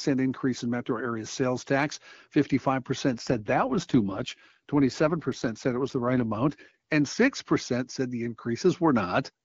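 From 3.12 s to 6.92 s there is an AMR rate drop. The band stays as wide as before. The speech turns rough and synthetic. That fits the codec falling from its top HD Voice rate to around 8.85 kbit/s. Clarity returns at 6.92 s.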